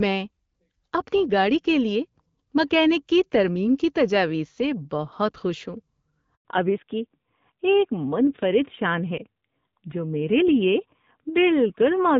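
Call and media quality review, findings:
Speech cuts out abruptly at 6.35 s, dead silence for 100 ms until 6.45 s. Handover gap: call moved between networks, no speech frames delivered during the switch, audio from that window lost rather than delayed.

From 6.45 s to end, speech turns dull and rougher, no content above 4 kHz, whereas before it carried the wider HD Voice band with only light coding damage. Fallback to narrowband after handover, AMR-WB to AMR-NB, roughness fitting a low rate near 7.4 kbit/s.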